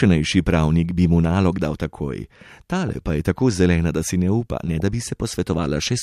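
Weak DAB reception lets bit errors slip past the error correction into the MP2 audio data. Corrupted samples put short blips of noise into individual sub-bands, and corrupted scale factors throw sub-bands to the wrong level for up to a frame, and that is DAB burbling. In this speech clip it comes at 2.89 to 2.95 s and again, heavier, at 4.66 to 4.82 s. The second burst points to roughly double the error rate.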